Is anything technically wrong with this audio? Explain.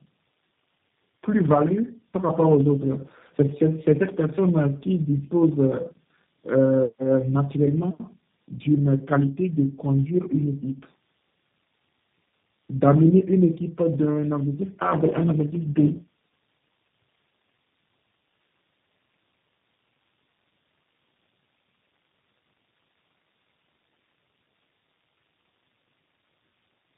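Yes, there are two faults.

Throughout the speech there is tandem speech coding. The sound passes through three low-rate speech codecs in a row, pointing to G.729A, AMR-NB and G.729A again, each recoding the last one's damage. The result is rougher, more muffled and more warbly than one codec alone, with nothing above 3.6 kHz.

From 14.54 to 16.25 s there is a block size mismatch (truncated). One stage writes longer blocks than the next reads, fitting 512-sample writes, and each block's tail is discarded. You hear a 100 Hz buzz, and the speech runs 1.07 times faster with its timbre kept. That kept timbre separates it from a resampling speed error.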